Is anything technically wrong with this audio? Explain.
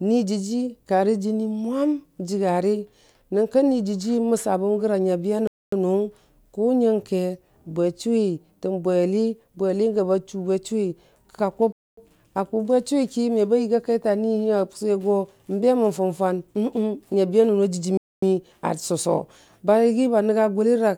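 Yes. A gap between chunks occurs three times, at 5.47 to 5.72 s, 11.72 to 11.97 s and 17.97 to 18.22 s. Each is a 250 ms silence, inserted where the speech was split into 6 s segments. Nothing is lost, but the delivery stops abruptly at each join and resumes after the hole.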